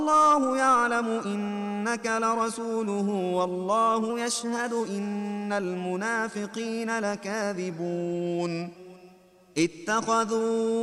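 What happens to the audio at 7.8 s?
From 7.70 s to 8.76 s the audio drops into a drift correction step: playback slows by 5.4% and the pitch falls about 96 cents, nearly a semitone, then snaps back to normal. This is likely clock-matching software retiming in one jump to refill its buffer. Unlike tape wow, which drifts smoothly and repeatedly, this is one flat, square-edged detune lasting about a second, with speed and pitch moving together.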